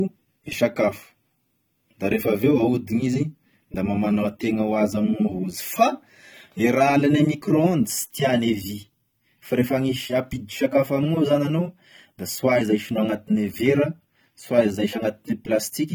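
It's a speech recording, and the whole thing carries the swirly, smeared coding artefacts of a heavily squeezed file, even though it's packaged as a roomy high-bitrate MP3 with content running up to about 19 kHz. That's the classic low-bitrate audio saved at a high bitrate case: it was likely an AAC file at something around 32 kbit/s that got re-encoded to MP3 at around 256 kbit/s. The second pass just preserves the damage the first one did.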